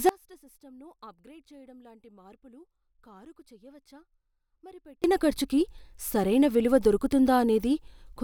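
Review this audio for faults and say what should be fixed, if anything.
There's an audio dropout to a faint residue from 0.09 s to 5.04 s. For nearly five seconds the speech falls away to a faint leak, roughly 25 dB below normal, and then snaps back in at "ఖర్చుకి సరైన విలువ". It's abrupt, not a fade, and likely a break in the signal upstream while the path after it stayed live. Fix it by checking cables, connectors and the source routing before recording so the feed can't drop out mid-take.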